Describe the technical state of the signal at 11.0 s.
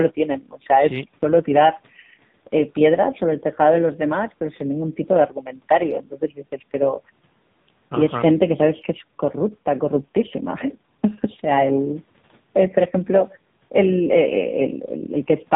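At 11.0 s the speech is going through the AMR narrowband mobile codec, as it does for the whole clip. Everything above 4 kHz is gone and the vocal-tract model sounds heavily buzzy and synthetic, which fits a low mode around 6.7 kbps.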